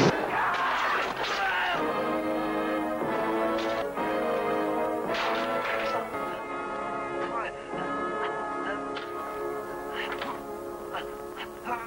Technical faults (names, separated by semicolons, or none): digital radio blending to analogue